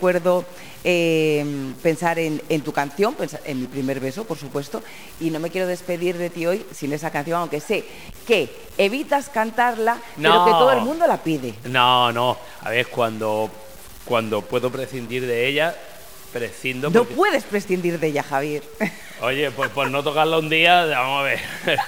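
A stuck bit runs through the whole clip, most likely one data line or converter bit held permanently at 0 or 1. Every sample whose true value disagrees with that bit is pushed off by the bit's weight, a step of roughly -35 dBFS, so the error follows the waveform itself. Louder passages take on a harsh, buzzy distortion, and because the bit also flips with the sign of small values, the quiet gaps fill with a steady noise floor instead of falling silent.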